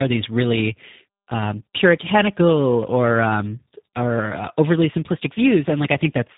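Speech with tandem speech coding throughout: rough, muffled and warbly, with nothing above 3.8 kHz, consistent with two low-rate speech codecs in a row, ending in G.729A.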